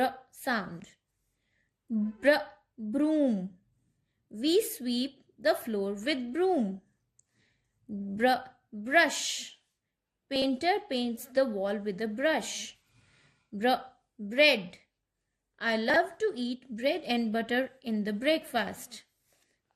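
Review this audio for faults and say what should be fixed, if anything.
The sound is dull throughout, with a gurgling, granular grain. The likely cause is MP2 compression at a low rate, around 80 kbps, starving upper sub-bands of bits. Encode at a higher bitrate or use a more efficient codec.

Chunks out of order cause brief jumbled moments at 0.80 to 0.84 s, 10.36 to 10.44 s and 15.90 to 15.96 s. Short segments, consistent with 20 ms chunks, play one to three places late. Buffer and reorder chunks by sequence number before writing or playback.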